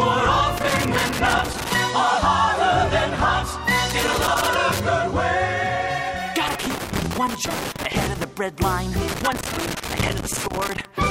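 Irregular bursts of crackle and scratching break through the audio from 0.57 to 1.75 s, 3.90 to 4.80 s, 6.48 to 8.24 s and 9.08 to 10.85 s. This is loose connector crackle: a worn or dirty contact intermittently makes and breaks, chopping the signal into crackling fragments.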